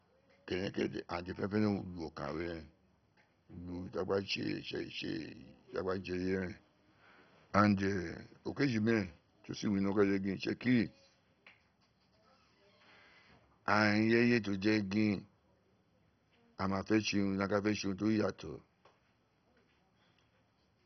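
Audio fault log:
throughout MP2 compression: the speech was likely passed through an MPEG Layer II coder at a very low rate, one that fits about 32 kbps. Its upper sub-bands are shut off and the rest coarsely quantised, leaving nothing above 6.1 kHz and a dull, heavily gurgling, granular sound.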